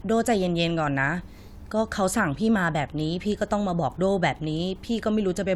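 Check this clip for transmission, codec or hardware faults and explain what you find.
No transmission, codec or hardware faults.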